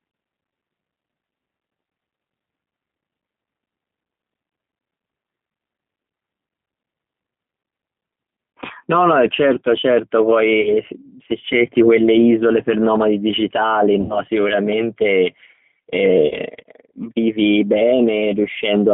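G.729 coding runs through the whole clip. The speech is rebuilt at 8 kbit/s from a vocal tract filter, a pitch predictor and a few pulses per frame, and it is heard through a line band of about 150 Hz to 3.5 kHz, so nothing bright survives. The codec damage is plainly audible: the speech stays intelligible but sounds rough, thin and somewhat synthetic, with the grainy texture of a low-rate pulse-coded signal.

VoIP packet loss concealed by the speech codec occurs at 10.61 to 10.74 s, 14.01 to 14.20 s and 16.27 to 16.35 s. The first and third gaps each cover 40 ms of missing audio, which fits two lost 20 ms packets. The middle gap covers 80 ms, which fits four. In each gap the decoder keeps repeating its last pitch and filter at falling gain, so the sound smears into a buzzy tone or coloured noise that fades. Each frame builds on the one before, so the speech stays weak or distorted for a short while after packets resume.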